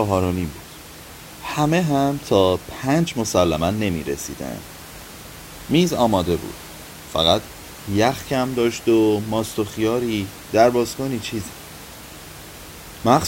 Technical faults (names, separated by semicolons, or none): none